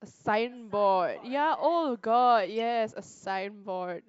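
At 2.59 to 2.61 s the speech carries a corrupt frame decoded fault: flipped bits in a few compressed frames were decoded anyway, misplacing spectral energy. It sounds like a brief chirp or blip, fairly low in level, peaking around -30 dBFS.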